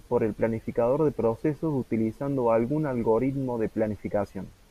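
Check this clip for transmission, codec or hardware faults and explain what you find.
No transmission, codec or hardware fault can be heard anywhere in this speech clip.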